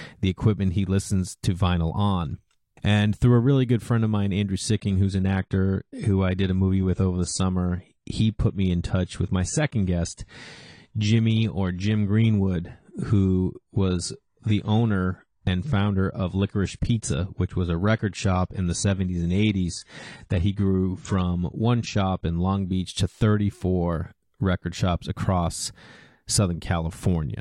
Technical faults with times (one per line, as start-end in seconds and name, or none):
4.75-22.75 adaptive stream at a lower bitrate